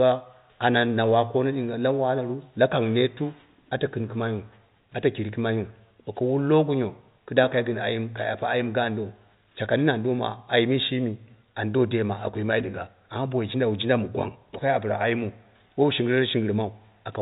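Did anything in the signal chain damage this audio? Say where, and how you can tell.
No, nothing in the chain has damaged this speech. It is carried by G.711 telephone coding, which fits A-law, so the sound stops at about 3.8 kHz, with only the faint level-following noise that format brings.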